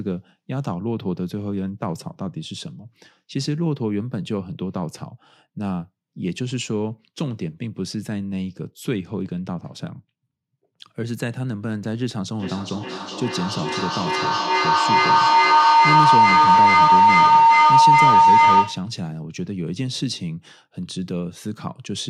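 From 12.38 s to 19.01 s a piercing tone near 1 kHz swells, with a loop delay of about 400 ms, peaking about 12 dB above the speech: a feedback howl, where a microphone-to-loudspeaker loop gains level on each pass until broken.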